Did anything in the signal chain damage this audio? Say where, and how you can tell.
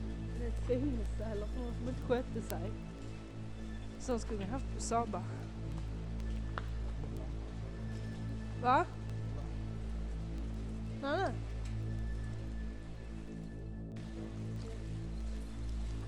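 Yes, at the digital link into the receiving device. Word clock ticks run from 0.25 s to 16.01 s: sharp clicks of uneven strength roughly every 0.15 s, about a hundred in all. The receiver's free-running clock drifts around 150 ppm from the sender's, and each slip drops or repeats one sample.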